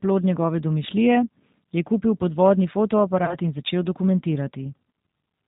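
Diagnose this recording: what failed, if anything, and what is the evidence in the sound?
At the codec stage, the whole clip shows G.729 codec damage. The speech is band-limited with nothing above 4 kHz, and it has a rough, slightly synthetic texture throughout. The artefacts are plainly audible, and their character fits the 8 kbit/s G.729A variant. The decoder rebuilds each 10 ms frame from a vocal-tract filter, a pitch predictor and a sparse set of pulses, so fine waveform detail is lost and the voice sounds coarse.

On the network side, VoIP packet loss concealed by the speech codec shows up from 3.25 to 3.36 s. The speech briefly smears into a stretched sound that weakens, then stays degraded before clean frames take over. The gap is about 30 ms, which fits three lost 10 ms frames. The decoder filled the hole by repeating its last pitch and filter with falling gain, and the predictive state needed time to recover afterwards.

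At playback, there is a loudspeaker feedback squeal from 4.01 to 5.45 s. A single 6.2 kHz tone swells over about a second and then sits at roughly 5 dB below the speech. Because 6.2 kHz lies above the codec's 4 kHz ceiling, the tone was not carried through the call. It arose acoustically after decoding, when a microphone picked up the loudspeaker it feeds. At 6.2 kHz the loop gain exceeded one, so that frequency kept building on itself.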